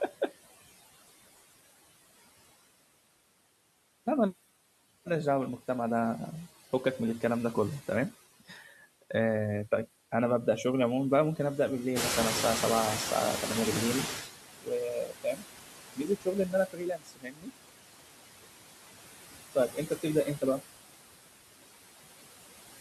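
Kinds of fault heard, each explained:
Noise suppressor artifacts: The suppressor pulls down every band it judges to be steady noise, here by about 19 dB, frame by frame, so the background sinks in pauses and rises under the speech.
Speech cut by the noise suppressor: Mistaking parts of the speech for noise, the suppressor turns them down with the background, by up to about 22 dB. Stretches at 8.4 to 8.81 s, 14.58 to 15.45 s, 15.95 to 17.58 s, 19.55 to 20.06 s and 20.25 to 20.64 s sound swallowed or faint.
Noise suppressor catching up: When the room noise jumps by about 14 dB near 12 s, the suppressor's noise estimate lags, so the louder background comes through with less reduction until it adapts over about 2.4 s, sinking by about 14.31 s.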